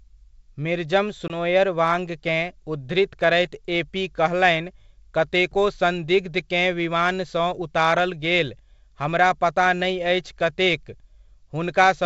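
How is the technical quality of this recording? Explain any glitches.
A single glitch stands out in this speech recording, over a G.722 wideband line at 64 kbit/s that keeps its clear top end. From 1.28 to 1.33 s there is a hard-edged 20 ms hole, after which the sound comes back with brief, slight distortion. This is packet loss on an ADPCM call: a couple of packets went missing and were filled with silence, leaving the decoder's predictor and step size out of step with the sender's until they resynchronised.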